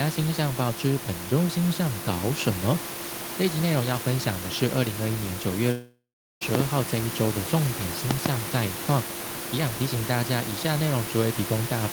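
Speech, with room noise sitting about 12 dB below the talker, is broken at 5.71 s by a long network dropout: the last sound smears into a fading buzz, then about 0.39 s of silence, resuming at 6.43 s with roughly 0.7 s lost rather than merely muted. Loud pops, each a double click about 20 dB above the speech, land at 6.55 to 6.62 s and 8.11 to 8.28 s, likely from plug, switch or static transients, since speech continues intact beneath them.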